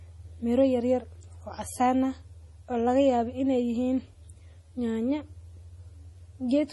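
From start to finish, the speech has been reduced to very few bits per sample, with dither added before rounding, which fits roughly 10-bit audio. The rounding error becomes a steady, even hiss about 40 dB below the speech, with no gritty distortion.

Also throughout, the audio has likely passed through heavy MP3 compression at a low bitrate, consistent with about 32 kbps. Everything above 11.5 kHz is gone, dulling the treble, and weak detail flickers between frames, giving a watery, swirling texture with chirpy s sounds.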